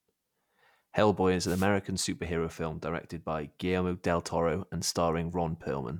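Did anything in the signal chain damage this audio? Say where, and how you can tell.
Yes. A wireless microphone noise hit damages the radio link ahead of the receiver. From 1.44 to 1.68 s, just before "superhero film directed by", a short swish of static is heard. The FM signal faded as reflections cancelled, so receiver noise rose.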